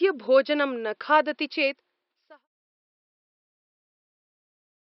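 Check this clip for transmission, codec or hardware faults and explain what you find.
Nothing here points to a transmission, codec or hardware problem: the faint room noise sitting about 47 dB under the speech belongs to the recording itself, and the smooth fade-out that begins around the one-second mark and finishes at 2.48 s is an ordinary edit with no click or hard edge.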